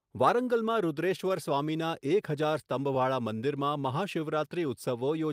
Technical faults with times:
0.00-5.32 clock drift between sender and receiver
0.43-2.99 scattered short gaps
2.47-5.00 repeated timing corrections

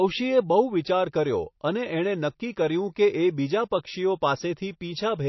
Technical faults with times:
0.00-5.28 MP3 compression

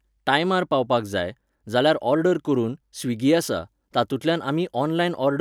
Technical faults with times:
none

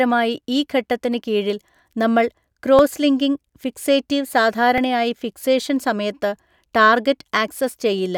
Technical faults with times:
2.79 repeated buffer
4.78 repeated buffer

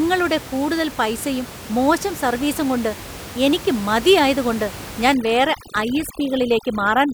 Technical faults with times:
5.14-7.13 overdone noise removal

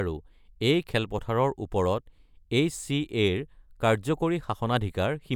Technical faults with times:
none

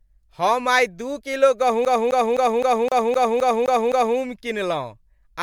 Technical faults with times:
0.00-5.42 generation loss
1.85-4.18 CD stuck on one turn

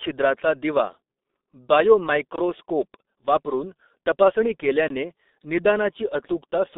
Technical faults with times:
0.00-6.78 G.723.1 codec

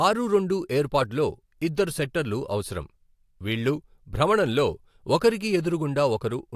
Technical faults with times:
none

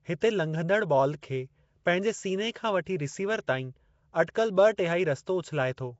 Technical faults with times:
0.00-6.00 Nellymoser compression

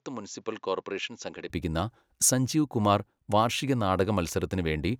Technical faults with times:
0.00-1.50 input switched to a poorer device

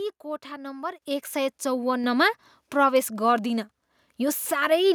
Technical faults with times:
1.02 microphone volume stepped up

